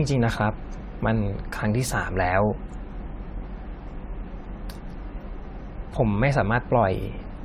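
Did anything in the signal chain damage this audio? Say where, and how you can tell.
Yes. Generation loss runs through the whole recording, and it sits at the codec stage. The speech sounds swirly, hollow and smeared, with consonant attacks blurred, more than a single encode at a moderate rate would cause. Nothing is present above about 17.3 kHz, which fits an AAC-LC encoder at around 96 kbit/s. The likely cause is about seven decode and re-encode passes, each quantising on a shifted frame grid so that noise and spectral holes pile up.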